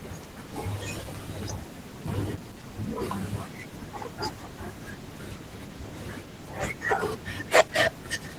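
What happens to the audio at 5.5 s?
At 5.5 s you're hearing Opus voice compression, which runs through the whole clip. The speech is split between linear-prediction coding below 8 kHz and a thin transform layer above it, with coarse excitation. It comes across hoarse and slightly robotic, which fits a bitrate around 16 kbps.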